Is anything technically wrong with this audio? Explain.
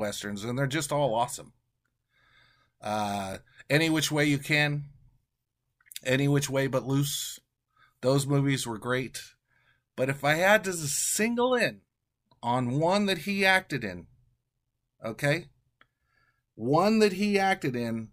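Yes. At 3.33 s, just before "any which way you", the speech dips for a split second and comes back with a small tick. This is a block of digital silence lasting about 5.8 ms, which fits a 256-sample buffer that was never filled in time and went out as zeros. The audio cuts to silence and back with no fade, so the two abrupt edges merge into one brief click.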